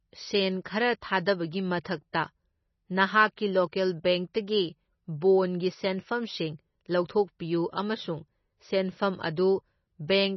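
From start to finish the speech has a hard ceiling at about 5.9 kHz, with nothing above it, and the remaining spectrum sounds watery and swirly as weak frequency components flicker in and out between frames. This is heavy damage that points to MP3 compression at a low bitrate, likely around 24 kbps. The flickering sets it apart from a simple low-pass filter, which would dull the treble but leave the rest steady and smooth.

At 3.36 s and again at 3.72 s there is pre-echo: a brief hiss, spread over about 13 ms and 12 ms, arrives just ahead of a sharp onset, which sounds softened. The encoder spread noise meant for the loud attack across its whole block, so it leaks into the quiet moment before. It differs from a click because it is diffuse hiss, and from reverb because it comes before the sound, not after.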